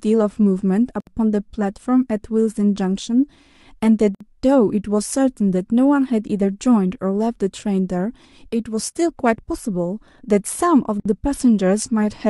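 At 1.00 s, 4.15 s and 11.00 s the speech breaks into silence for 66, 57 and 56 ms: a gap at a join of encoded pieces, where untrimmed encoder delay and end padding sit between separately encoded segments. Unlike a dropout, nothing is lost, and speech resumes exactly where it stopped.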